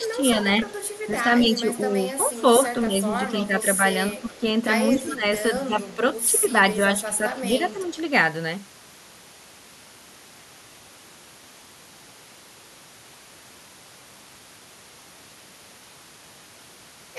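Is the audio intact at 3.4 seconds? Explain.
No. Speech suppressed in double talk runs from 0.0 to 7.97 s, so 3.4 s falls inside it. The voice dips by up to about 10 dB, for around two seconds in total, most likely because an echo canceller confused it with loudspeaker echo while both sides talked and turned it down.

An echo leak also spans 2.82 to 3.45 s. A faint copy of the voice returns 227 ms late, roughly 25 dB below the speech, likely because a speakerphone's echo canceller failed to remove all of the sound its microphone picked up.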